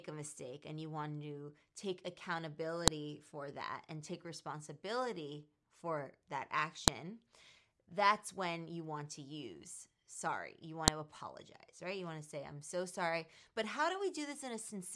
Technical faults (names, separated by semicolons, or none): file header played as audio